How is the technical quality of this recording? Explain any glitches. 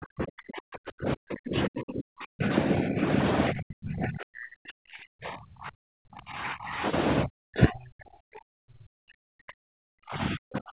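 The recording is rough: the speech keeps getting pushed down hard.

Speech suppressed in double talk, from 0.0 to 2.51 s, 3.51 to 6.73 s and 7.24 s to the end, plus a lighter dip at 2.69 to 3.05 s. The level sinks by about 40 dB, about 10 dB in the short one, so the talker fades or chops out. That's likely an echo canceller mistaking the talker for echo while both sides spoke.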